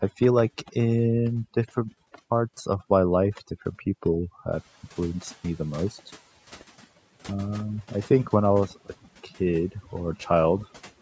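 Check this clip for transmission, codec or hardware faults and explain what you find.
Two processing faults turn up, both from the noise suppression rather than the transmission or the hardware.

Overdone noise removal runs through the whole clip. The suppressor is set so aggressively that any frequency band sitting near its noise estimate gets pushed right down, taking the quieter parts of the speech with it. You hear the background drop and break up into little twinkling specks.

The noise suppressor catching up happens from 4.51 to 4.68 s. The room noise jumps by about 13 dB around 4.5 s, and the suppressor's estimate lags behind for roughly 170 ms. During that stretch the noise gets through less reduced, then sinks by about 8 dB once the estimate adapts.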